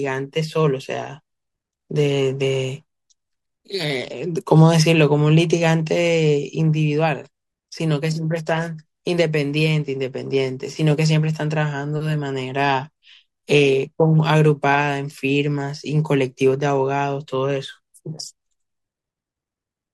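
Speech recording with no technical faults audible anywhere.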